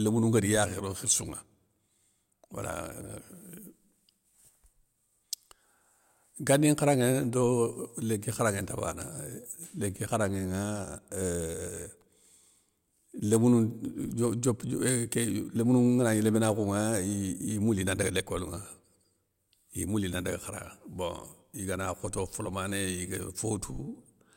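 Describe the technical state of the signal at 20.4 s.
At 20.4 s the speech signal is intact, with no technical fault present at that point.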